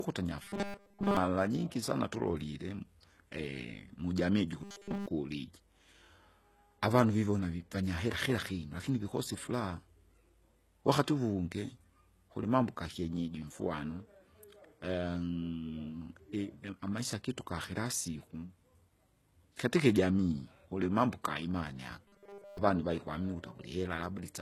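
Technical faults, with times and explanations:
Throughout, HE-AAC compression: The speech was likely squeezed through HE-AAC at a very low rate, consistent with roughly 16 kbps. Only the lower band is truly coded, and the treble is rebuilt by copying lower bands upward under a coarse envelope, so the top end is synthetic rather than original. The damage is plainly audible: sibilants turn gritty and metallic because the copied harmonics don't line up across the crossover.
0.42–1.17 s, 4.64–5.08 s and 22.08–22.58 s, robotic sound from repeated short buffers: Fresh audio was likely arriving too slowly, so playback filled the gaps by looping the last short block while the real signal was skipped. The loop imposes a fixed buzz at 200 Hz, which points to a repeat length of about 5 ms. In the first stretch much of the sound is replaced, and in the later two nearly all of it, giving a rigid, metallic drone that only loosely tracks the speech.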